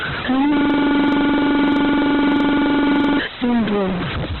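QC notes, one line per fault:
Throughout: stuck bit. The speech carries a grit that tracks the waveform, and the gaps between phrases are filled with a hiss rather than falling silent. This is the sound of one sample bit held at a fixed value: roughly half the samples land off by that bit's weight, and small signals near zero flip sign-dependently, so the pauses turn into noise. The likely cause is a broken data line or converter fault.
Throughout: Opus compression. Nothing is present above about 4.2 kHz, so the speech sounds boxed-in and narrowband, and what remains is rough and grainy rather than swirly. That texture points to Opus in its CELT music mode, which keeps each band's energy but fills starved bands with noise or folded copies of lower bands. The damage is heavy, which fits a very low bitrate around 12 kbps. Likely cause is aggressive encoding at a narrowband setting.
0.57 to 3.19 s: system hang loop. 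A single 42.67 ms slice of audio repeats exactly, about 60 times, producing a rigid machine-gun stutter at roughly 23.4 Hz for over two and a half seconds before normal playback resumes. The loop length fits a 2048-sample buffer. This is what happens when the host or driver stalls while the sound hardware keeps cycling the same ring buffer, replaying its stale contents until the system recovers.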